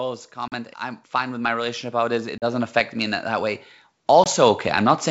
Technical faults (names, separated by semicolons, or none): automatic gain rising; packet loss on an ADPCM call